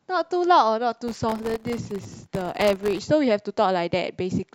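From 1.08 s to 2.99 s the speech is overlaid with a dense, gritty crackle, a tearing texture made of hundreds of tiny dropouts that stops at the end of that span. This is processor overload crackle: the processor fell behind and kept missing the deadlines for very short audio buffers, each about 0.7 ms. Every missed buffer left a brief hole of silence with hard edges, and so many in a row fuse into crackle.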